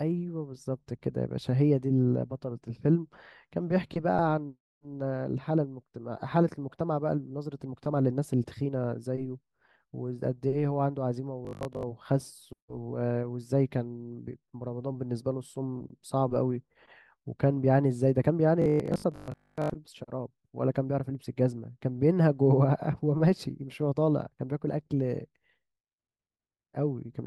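New audio likely arrived too seldom, so short 20 ms buffers were replayed in its place, giving robotic sound from repeated short buffers: a rigid 50 Hz metallic buzz over the speech from 11.45 to 11.83 s (about half repeated) and 18.62 to 19.70 s (mostly repeated).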